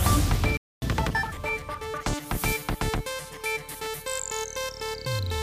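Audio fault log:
0.57–0.82 s, playback stall: the sound cuts out in mid-flow and the output stays silent for 0.25 s before resuming. The gap is a clean drop to silence rather than a fade, which points to the output simply receiving no samples for that interval. The likely cause is the player's buffer running dry or its audio thread being blocked, with output restarting once data was available again.
0.82–1.32 s, catch-up at higher speed: immediately after the gap the audio runs at 1.5 times normal speed for half a second, and its pitch rises with it by roughly a musical fifth. Speed and pitch rise together because the backlog is being resampled to play faster, not time-stretched. Once the lost time is recovered at 1.32 s, playback returns to normal rate and pitch.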